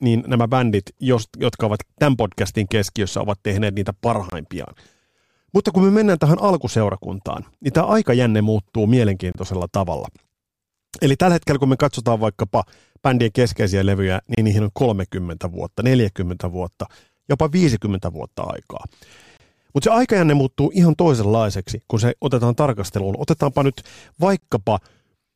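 Short, hard-edged holes of silence, each about 25 ms long, cut into the speech at 4.30, 9.32 (just after "niin tämä aikajänne muuttuu"), 14.35 (between "vaikkapa bändien keskeisiä levyjä" and "niihin on"), 19.37 (after "vuotta aikaa") and 24.40 s. The steady 5-second spacing marks this as a gap between chunks: the audio was handled in 5-second blocks, and silence was left at each join rather than any sound being lost.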